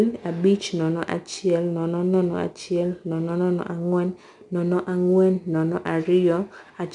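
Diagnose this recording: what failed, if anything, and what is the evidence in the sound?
Codec stage: 4-bit ADPCM compression runs through the whole speech clip, with a gritty hiss that rises and falls with loudness and grit on sharp onsets. Nothing sounds above 10.7 kHz, which fits roughly 89 kbps. Steady tape hiss wouldn't vanish in pauses, and there's no perceptual-codec warble.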